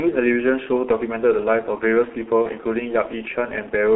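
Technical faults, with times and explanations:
throughout, G.723.1 codec: The whole clip is confined to roughly 250 Hz to 3.5 kHz, with heavy coding damage that fits a low-rate codec running near 6 kbit/s. The codec rebuilds speech from a coarse vocal-tract model refreshed only every 30 ms, so fine spectral detail and fast transitions are lost. The result is a muffled, hoarse quality with smeared consonants, and almost nothing in the low bass or above the 3.5 kHz edge.
2.42–2.48 s, VoIP packet loss concealed by the speech codec: A gap consistent with a single lost 30 ms frame is filled by the decoder, which carries forward its last pitch and filter settings at falling gain. This produces a brief stretched, fading sound in place of real speech. Because each decoded frame depends on the previous one, the disturbance lasts beyond the missing 30 ms, past about 2.48 s, while the decoder's state recovers once packets resume.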